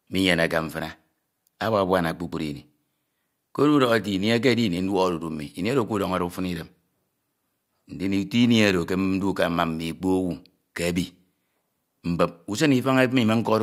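Resampler restarted on every block, throughout the clip: the 48 kHz to 44.1 kHz conversion appears to run on each 10 ms block in isolation, so every edge lacks its true neighbours and carries a small error, heard as a 100 Hz buzz riding on the speech.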